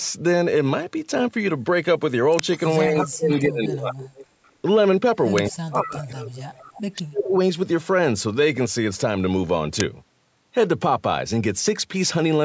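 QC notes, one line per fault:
2.39 s, 5.38 s, 9.80 s: uninitialised buffer. Each is a brief, loud crack of digital noise where stale memory was played as audio, about 2.7 ms at the first two and 5.3 ms at the last, which fits 128- and 256-sample blocks. Unlike a dropout, it is an explosive burst of noise rather than a gap.
2.53–3.40 s, 4.03–4.52 s, 5.50–6.82 s: echo leak. A distinct copy of the speech trails 207 ms behind, about 10, 25 and 20 dB below it in turn, likely residual loudspeaker pickup the echo canceller failed to remove. Unlike room reverb, it is a separate delayed repeat rather than a smooth tail.
2.89–4.05 s, 5.50–6.21 s, 6.94–7.34 s: speech suppressed in double talk. The talker's level sinks while the far side is playing on the loudspeaker, by up to about 20 dB at first and about 40 dB later, likely the echo canceller ducking both sides at once. Unlike a dropout, the speech fades and recovers.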